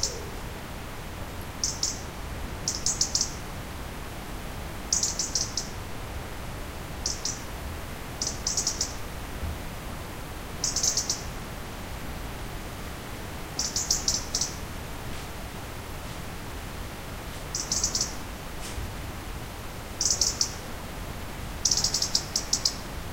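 Nothing in the recording stood out as a technical problem on listening.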